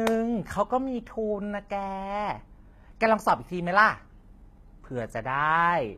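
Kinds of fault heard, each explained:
HE-AAC compression: treble above the coded band is likely rebuilt from copied lower bands, so sibilants sound gritty and metallic, with nothing above 14.9 kHz.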